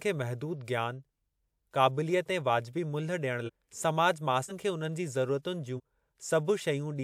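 A short break interrupts the speech at 3.46–3.50 s, 4.48–4.52 s and 5.76–5.80 s, and each time the speech lurches forward. These are compressed frames skipped. Whole frames never reach the output, either missing from the file or rejected by the decoder as damaged. The jumps lose roughly half a second, a fifth of a second and a tenth of a second, which fits whole frames of about 43 ms.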